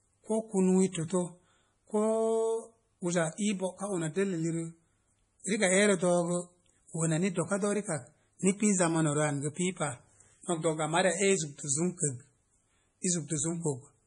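From start to finish the speech carries heavy damage, likely from MP3 compression at a very low bitrate, about what 32 kbps would give. The encoder has dropped everything above 10.5 kHz, so a spectrogram shows a flat, hard ceiling there, with the weaker bins below it switching on and off into a patchy, speckled texture. To the ear this is watery and swirling, with metallic chirps on s sounds and consonant attacks smeared into the vowels.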